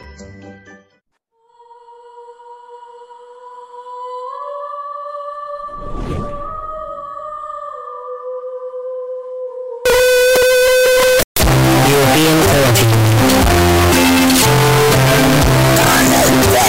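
From 9.85 s to the end at 16.68 s, the audio turns almost square and sits at an almost fixed, high level. It is very loud and harsh. Background noise becomes as loud as the main sound. This is likely float read as integer, with 32-bit float samples read as 32-bit integers.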